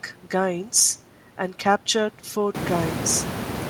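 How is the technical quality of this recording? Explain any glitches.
The recording has no technical glitches; the only change is that the room's own background noise rises by about 19 dB from around two and a half seconds in, which is part of the acoustic environment and still sits roughly 10 dB below the speech.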